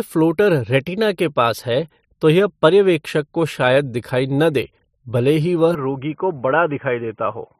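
At 5.75 s the recording likely switched its input to a poorer device, such as another microphone or a headset's call profile, and stays there until the end at 7.6 s. The new path passes nothing above 3.3 kHz, so the speech abruptly turns dull and boxy, losing its upper clarity. The change comes with no silence at the switch, the level falls by roughly 5 dB, and a faint new background noise appears, far below the speech.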